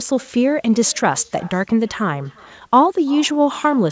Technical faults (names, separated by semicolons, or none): echo with no canceller